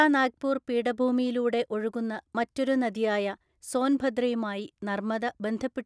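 No technical faults can be heard anywhere in the speech.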